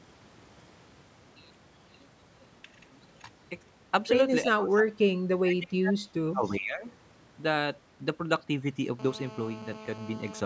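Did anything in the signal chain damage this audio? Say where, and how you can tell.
Yes. The damage is in the call processing, and it comes in two forms. First, speech is suppressed in double talk in three stretches: 4.45 to 4.89 s, 5.39 to 6.03 s and 6.31 to 6.85 s. In each, the speech level sinks by roughly 20 dB, and by about 30 dB in the middle stretch, then recovers. The likely cause is an echo canceller that could not tell its own talker from loudspeaker echo while the far side was speaking, so it attenuated everything.

Second, there is an echo leak from 6.46 to 6.53 s. A faint copy of the speech returns about 339 ms late, roughly 30 dB below the direct sound, heard as a brief scrap. It likely comes from a far end on speakerphone whose echo canceller left some microphone pickup of its loudspeaker in the return path. It lands inside the third suppression window, which fits the canceller being confused during the same overlap.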